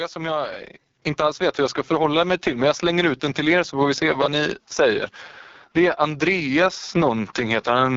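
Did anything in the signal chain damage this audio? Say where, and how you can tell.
Yes. Codec stage: the whole clip sounds rough and raspy with nothing above 7.5 kHz, which points to the AMR wideband (HD Voice) codec at its lowest rate, around 6.6 kbit/s.

Call processing: at 1.02 s the microphone volume stepped up about 6 dB, voice and background jumping together, as the software raised the input gain in one go.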